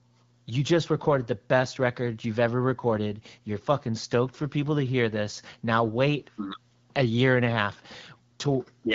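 No technical faults are audible.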